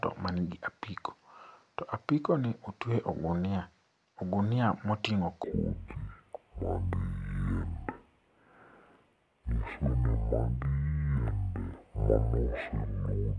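From 5.44 s to the end, a wrong sample rate fault plays the speech at half speed and an octave lower, which fits 44.1 kHz audio played near 22 kHz. It sounds slow and deep. On a spectrogram, harmonics sit at half their frequency and are stretched twice as long.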